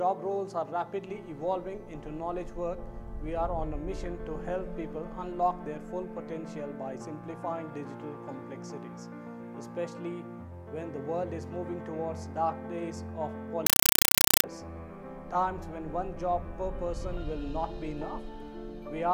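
From 13.66 to 14.44 s, a compressed stream is played as audio: an undecoded bitstream, which points to 256 kbps AC-3, is output as raw samples. Each frame becomes a 5.33 ms noise burst and then silence, 31.25 times a second, heard as loud, chattering static in place of the sound.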